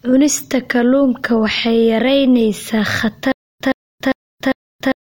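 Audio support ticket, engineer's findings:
Stutter with silent gaps from 3.32 s, after "kalluunka waxay yaraynaysaa", to end. A 114 ms speech fragment repeats four times, every 400 ms, with 286 ms of digital silence between. Likely a stalled player or stream replaying its last buffer. Intervening audio lost.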